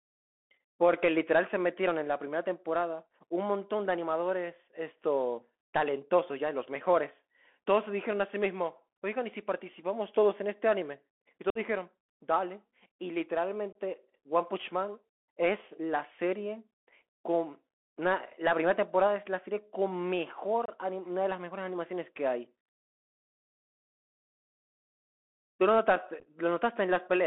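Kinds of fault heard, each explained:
Bluetooth CVSD headset codec: The speech sounds boxed-in and telephone-thin, limited to roughly 250 Hz to 3.4 kHz, with scratchy s sounds, gritty hiss and distortion on loud bright passages. The one-bit up/down coder's adapting step cannot keep pace with fast changes.
Unconcealed Bluetooth headset packet loss: Abrupt holes punch the speech at 11.50–11.58 s (about 52 ms gone), 13.73 s and 20.66 s (about 26 ms each), and as a brief crackle over 60 ms near 26.20 s. Lost radio packets were replaced with silence or an idle pattern, not patched over.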